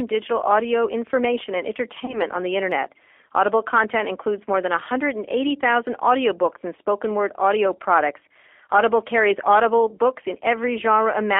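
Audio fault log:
throughout, G.729 codec: the speech passes through an 8 kbit/s G.729A coder on a 300 Hz to 3.4 kHz line, rebuilt from a vocal tract filter, pitch prediction and a sparse set of pulses per frame. The damage is plainly audible, a rough, slightly synthetic edge on every syllable. On a spectrogram, energy stops sharply near 3.4 kHz and thins below 300 Hz, and harmonics look smeared and grainy rather than clean.
2.05 to 2.21 s, VoIP packet loss concealed by the speech codec: about 30 ms of audio went missing, which fits a single lost packet. The decoder filled the gap by repeating its last pitch and filter with falling gain, so the sound is briefly stretched into a buzzy tone or coloured noise that fades. Because each frame leans on the one before, the weakness lingers well past the gap. The waveform shows a repetitive, shrinking stretch, and the spectrogram shows the stretched sound fading out.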